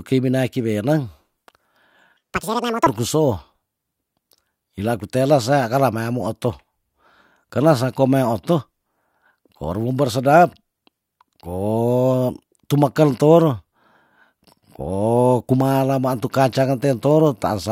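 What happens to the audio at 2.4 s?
From 2.17 to 2.87 s the speech suddenly races at double speed and jumps an octave (12 semitones) higher. This is audio read two samples at a time: each pair of samples is taken as one frame, halving playback time and folding high frequencies back.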